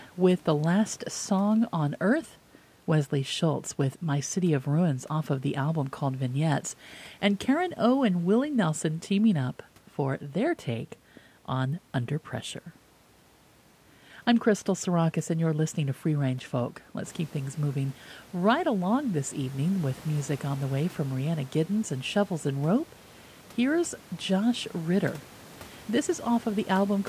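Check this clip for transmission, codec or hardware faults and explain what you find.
Nothing here points to a transmission, codec or hardware problem; the only change is the room's own background noise stepping up by about 10 dB around 17 seconds and still sitting about 25 dB below the speech, which is just the recording space rather than anything the system did.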